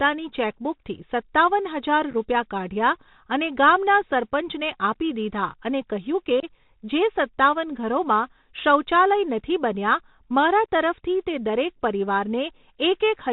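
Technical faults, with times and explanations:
Throughout: Bluetooth CVSD headset codec. The speech is squeezed into a narrowband 64 kbps stream of single up-or-down bits, so nothing above 4 kHz survives. The step size lags loud, bright sounds, leaving scratchy sibilants, clipped-sounding peaks and a granular hiss beneath the voice.
2.11 to 2.15 s and 6.40 to 6.44 s: unconcealed Bluetooth headset packet loss. Short voice packets between headset and phone dropped out and were left as gaps. The first is about 15 ms of scattered holes over 30 ms, none longer than 7.5 ms. The second loses about 26 ms. Both have abrupt edges, and the speech returns briefly quieter as the CVSD step size recovers.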